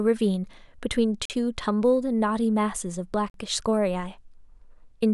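At 1.25 to 1.30 s and 3.30 to 3.34 s, the speech breaks with 44 ms gaps between chunks: silence inserted at 2.0 s chunk joins, heard as short holes.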